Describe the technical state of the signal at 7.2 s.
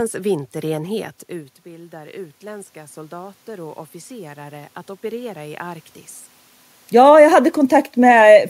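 Automatic gain falling runs from 6.84 to 7.3 s: the gain control, reacting to an overly loud input or strong background noise, eases its gain down by about 3 dB, so speech and room noise sink together.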